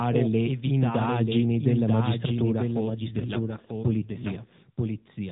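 Throughout the clip a doubled audio track is present, most likely because the speech is captured a second time over a slower path, or an edit leaves two copies out of step. A full-band copy about 5 dB quieter trails the original by roughly a second, with no decay or room colouring, so the speech returns as a flat, slightly softer repeat laid over whatever follows, blurring the speech into two overlapping streams.

From 2.90 s to 4.53 s, just after "le indagini della magistratura", an AMR rate drop occurs. The network pushes the mobile codec down from its normal rate, which sounds like 12.2 kbps, to a level consistent with 5.9 kbps, spending the freed bits on error protection. The narrowband band and continuity stay intact, with no gap, but the voice turns buzzier and more synthetic for that stretch. It then returns to the lighter codec colouring heard elsewhere.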